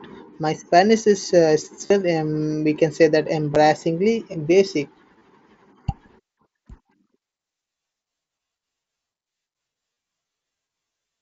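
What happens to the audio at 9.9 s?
Headset voice packets were lost from 9.93 to 9.96 s, a 30 ms gap fitting several dropped frames. The phone filled it by looping the best-matching recent waveform, so this concealed Bluetooth headset packet loss is a brief buzzy tone at full level, warbling as real audio returns.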